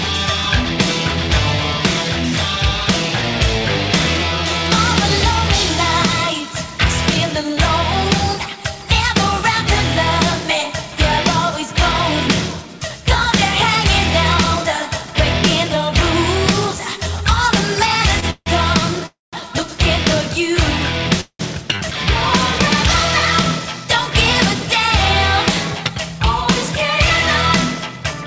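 At 18.20 to 18.25 s a packet arrived late and the jitter buffer ran dry: a short stall from a late packet. The receiver held the last sound for about 24 ms, so it drags briefly with a faint buzz, then resumes where it stopped, with nothing lost.

Three call audio freezes follow, at 18.30 to 18.49 s, 19.06 to 19.36 s and 21.21 to 21.42 s, likely from packets delayed in transit emptying the buffer. Each stretches the last sound into a fading buzz that drops to silence for 40, 170 and 70 ms. The audio then picks up where it stopped, inserting gaps of 158, 266 and 186 ms, through a G.722 path with nothing above 8 kHz.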